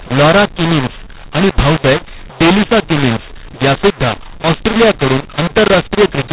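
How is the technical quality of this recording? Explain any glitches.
The quality is poor. The speech is harsh and distorted for the whole clip. It has the narrow telephone band, with nothing above 4 kHz, which fits G.711 telephone coding. The decoding is wrong, though.

The fault is mu-law and A-law mixed up, and it runs from start to finish. The audio was encoded with mu-law but decoded as A-law. The two laws map their 8-bit codes to levels differently. The levels come out scrambled, some too loud and some too quiet. The speech sounds gritty and distorted. Quiet samples are pushed well above silence, so the pauses fill with noise.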